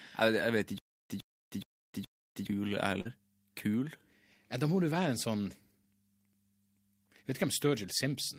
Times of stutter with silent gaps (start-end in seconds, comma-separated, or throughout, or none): 0.78-2.47